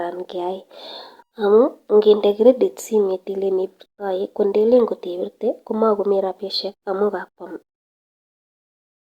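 Speech clip, no technical faults.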